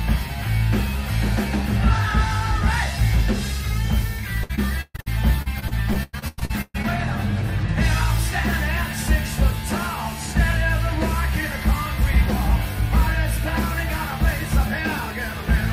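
The audio has repeated packet loss, heard as robotic sound, from 4.43 to 6.85 s. Packets went missing or arrived late again and again over this stretch. Each hole was bridged by extending the last bit of sound, and another hole came soon after. The result is choppy, with pieces dropped out. The patched gaps add up to about a third of the span. The longest single gap lasts 131 ms.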